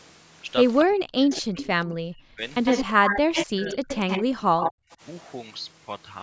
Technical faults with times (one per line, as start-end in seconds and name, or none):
0.84-2.43 speech suppressed in double talk
1.31-1.64 echo leak
2.65-4.23 echo leak
2.84-5.02 speech suppressed in double talk
4.63-4.95 echo leak